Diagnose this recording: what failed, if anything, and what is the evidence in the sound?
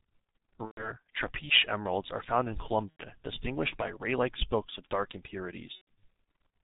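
The codec stage is at fault: the speech went through G.723.1 at a very low rate, which fits a stream of about 6 kbit/s. Nothing comes through above 4 kHz, and the slowly updated voice model leaves the whole clip muffled and hoarse, with consonants smeared.

The network stage also failed: VoIP packet loss, concealed by the speech codec, occurs at 0.65–0.95 s (before "trapiche emeralds are found"), 2.91–3.04 s (between "emeralds are found in" and "distinguished by"), and 5.75–5.88 s. The decoder stretched its last pitch and filter across the gaps with falling gain, consistent with roughly 90–120 ms of missing frames each time.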